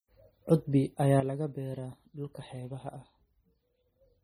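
Throughout, the speech carries heavy MP3 compression damage, likely from encoding at a very low bitrate; the loss points to something around 32 kbps. Starved of bits, the encoder discards weaker frequency lines and lets them flicker in and out between frames. The result is a watery, swirling texture with metallic chirping on sibilants, and consonant onsets that smear rather than snap.

At 1.20 s the level drops abruptly by about 10 dB and stays down to the end of the clip. This sudden gain jump is likely a digital gain change applied between one sample and the next with no ramp, such as a setting or bit shift taking effect instantly. Speech and background noise fall together in a single step, so the change sounds like an instant cut in volume rather than a gradual fade.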